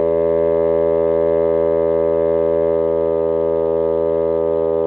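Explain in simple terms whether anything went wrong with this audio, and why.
Two things went wrong with how this music was delivered.

Between 0.94 and 2.75 s, the audio data kept arriving late, so the receiver's waiting buffer ran empty about twenty times. Each time it stretched the last bit of sound to fill the hole. These repeated stalls (stutter) are very short, at most 12 ms each, and nothing is lost, but the music catches and drags.

From 3.09 to 3.95 s, a jitter buffer slow-down took place. The buffer was running low or had just raised its target delay, and it built up a reserve by repeating tiny slices of sound. The music plays at about 83% speed at unchanged pitch, adding roughly 0.16 s and drawing the sound out. Throughout, the call line carries nothing above 4 kHz, so the top end sounds dull.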